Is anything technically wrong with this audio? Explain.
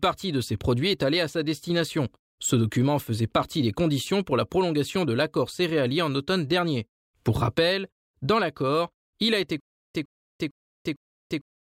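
Yes. From 9.60 s to the end, right after "l'accord il a été", there is a stutter with silent gaps: a 108 ms burst repeats four times, each followed by about 346 ms of dead silence, every 453 ms. This is likely a stalled stream replaying its last fragment on each retry, so the speech that belonged there is lost.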